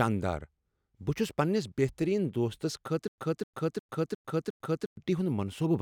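Stutter with silent gaps, 3.08 to 4.97 s: a 255 ms fragment replays five times between 100 ms silences, likely stalled playback retrying and losing audio.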